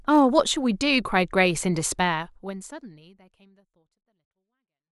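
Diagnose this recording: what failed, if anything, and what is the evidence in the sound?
Nothing failed; no faults.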